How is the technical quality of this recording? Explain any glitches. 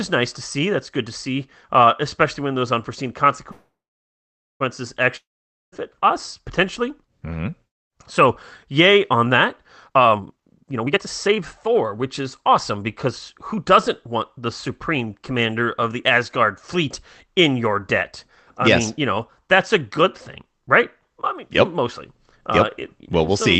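The recording has three clear glitches in this speech, all typical of a call connection. The audio is band-limited at 8 kHz, which points to an Opus call codec running at a low bitrate of around 20 kbps.

Call audio freeze, 3.51 to 4.62 s, right after "especially when those unforeseen": the sound turns into a short buzzy continuation that fades into about 0.88 s of silence, then resumes exactly where it stopped. Nothing is lost, but everything after it arrives about 1.09 s late. The likely cause is delayed packets draining the jitter buffer, so the receiver stretched the last sound until the data caught up.

Long network dropout, 5.16 to 5.74 s, just before "us potentially": again the sound fades into a hiss and then about 0.49 s of silence. When it returns, roughly 0.56 s of speech is simply missing. This is likely a stretch of packets that never arrived, so that part was never played.

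Jitter buffer speed-up, 9.89 to 14.47 s, from after "yay on that" to "supreme commander of the": the speech sounds hurried, running at about 124% speed with unchanged pitch. After the earlier delay, the receiver caught up by repeatedly cutting out tiny pitch-period slices, dropping around a second in total.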